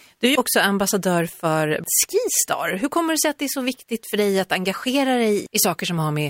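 No technical faults are audible.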